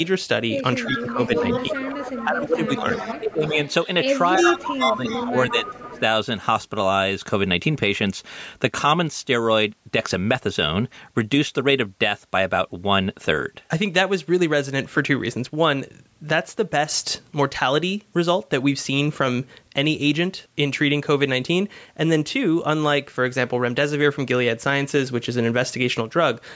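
From 0.84 to 3.86 s the far end's echo canceller likely failed to remove what its microphone picked up from its loudspeaker, so an echo leak sends the speech back about 0.35 s late, sitting roughly 10 dB below the direct sound as a delayed shadow. From 0.86 to 3.57 s, while that echo overlaps the talker, the canceller likely mistook the talker for echo and clamped down on both. This is speech suppressed in double talk: the voice dips by up to about 10 dB in pieces, around one and a half seconds in all, sounding choppy and dulled. The pattern repeats from 4.36 to 6.0 s with a stronger echo leak, again delayed by about 0.35 s but only about 5 dB below the speech. From 4.4 to 6.0 s the double-talk suppression also cuts deeper, with drops of up to about 15 dB across roughly one and a half seconds. The talker fades and breaks up, and the audio stays within the call band, with nothing above 8 kHz.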